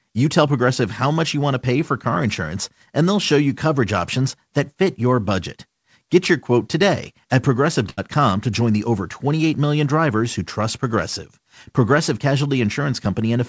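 Speech over a call line, with nothing above 8 kHz, which fits a G.722 codec. A burst of packet loss hits at 7.90 to 7.99 s, right after "your quote today at". Several packets never arrived in time. The receiver holds the last sound for about 74 ms and fades it down. Roughly 80 ms of speech is missing. The audio picks up again at "to join the over".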